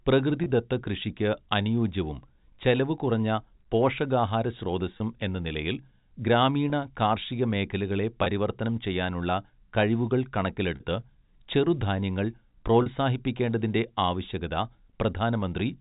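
Six short dropouts show up as packet loss with pitch repetition, at 0.44, 4.98 (just before "എന്ന നിലയിൽ"), 6.7, 8.24 (between "കാർഷിക മേഖലകളെ" and "ചെയ്യാനുള്ള കഴിവുകൾ"), 10.76 and 12.82 s. The first four each lose 20 ms, and the last two lose 40 ms. The receiver fills each gap by looping the last pitch cycle, so the speech briefly holds a slightly buzzy tone. Around them, the G.711 telephone coding comes through as narrowband phone audio.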